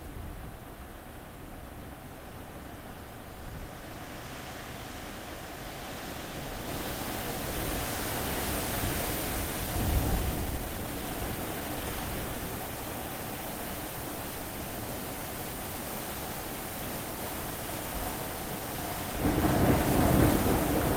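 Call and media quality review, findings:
Jitter buffer speed-up, 10.35 to 11.84 s. Sound hurried, about 126% speed, pitch unchanged. Receiver drops short pitch-period chunks to drain excess buffering, around 0.4 s removed.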